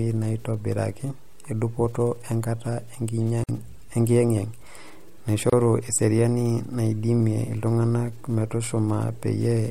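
At 3.44 s the speech drops out for about 51 ms. At 5.50 s it drops out again, for about 28 ms, just before "eseriani naidimia iltunganak". Both are gaps at a join of encoded pieces. The audio was encoded in separate segments and spliced without trimming. Each segment kept its encoder's leading delay and padded final frame. That padding becomes silence. The edges are smeared by the codec. Speech then resumes exactly where it stopped.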